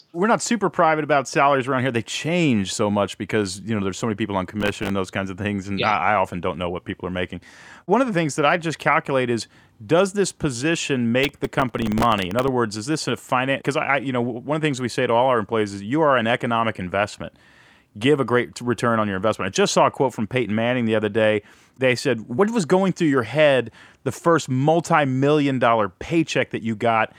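The processor fell behind its audio deadlines twice, causing processor overload crackle. Each overrun left a tiny slice of stale audio repeated with hard edges, fitting a buffer of roughly a millisecond and a half. From 4.61 to 4.90 s, after "so many people on", about fifteen misses give a short gritty burst. From 11.24 to 12.48 s, after "is does this position", dozens more produce a longer tearing crackle riding over the speech.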